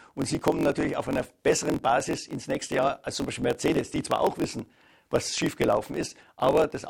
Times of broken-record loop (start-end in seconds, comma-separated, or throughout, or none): none